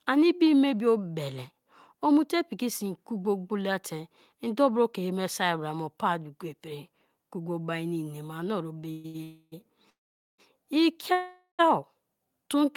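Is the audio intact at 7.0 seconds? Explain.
Yes, at 7.0 seconds the speech runs intact, with no dropout, click, glitch or other fault to be heard at that moment.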